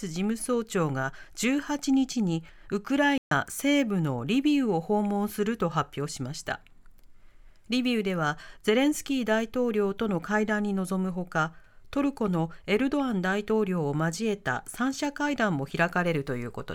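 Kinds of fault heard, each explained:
Playback stall: the speech drops to silence in mid-flow at 3.18 s and stays silent for about 135 ms, until 3.31 s, before carrying on. The likely cause is the player running short of buffered data or its output thread being briefly blocked.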